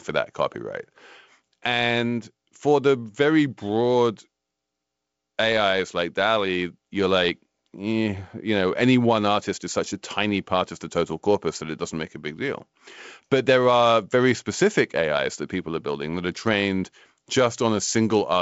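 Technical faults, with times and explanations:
No technical faults in this speech, which comes through G.722 wideband telephone coding with content reaching up to about 7.7 kHz.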